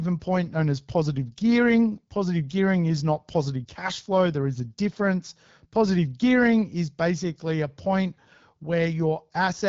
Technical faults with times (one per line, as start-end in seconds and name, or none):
0.00-9.69 AMR wideband (HD Voice) codec